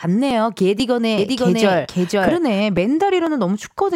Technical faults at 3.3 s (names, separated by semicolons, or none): audio missing between chunks